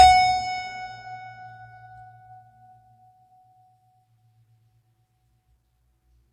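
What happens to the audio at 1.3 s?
At 1.3 s the music carries transcoding between lossy codecs, present throughout: content stops near 14.9 kHz, and stacked artefacts suggest a low-rate HE-AAC source likely re-encoded to WMA.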